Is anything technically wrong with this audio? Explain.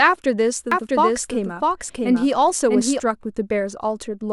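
Yes. From 0.72 to 3.0 s there is a doubled audio track. A full-band copy of the speech trails roughly 0.7 s behind at about the same level, with no decay or room colour. It likely comes from a slower second capture path. It starts and stops abruptly.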